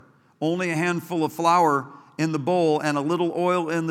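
From the start up to 2.68 s there's channel delay (comb filtering). One side runs roughly a sample late, a tiny fraction of a millisecond, so the mono sum cancels near 20 kHz. The speech sounds slightly dulled and soft on top.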